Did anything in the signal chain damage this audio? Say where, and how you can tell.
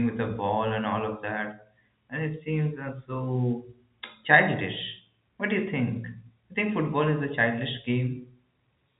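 No, the signal chain shows no damage: this is speech carried over standard G.711 telephone coding, with the band topping out near 3.8 kHz as that narrowband phone format requires, and any quantisation hiss riding under the speech is only faint.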